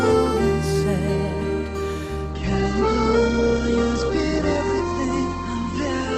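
From 2.31 s to the end, the sound abruptly loses its top end, with nothing above 8.2 kHz, and codec artefacts rise, all without any gap or dropout. This is an adaptive stream at a lower bitrate: the player switched to a leaner encoding of the same material, likely because the connection slowed. The narrowed bandwidth and added artefacts fit a drop from Opus at 64 kbit/s to Opus at 12 kbit/s.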